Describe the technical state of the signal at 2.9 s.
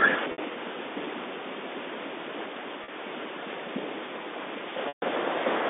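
Packet loss with pitch repetition hit from 2.84 to 2.88 s: about 40 ms went missing and the last pitch period was looped, giving a briefly held, buzzy sound that cross-fades back just before 2.9 s.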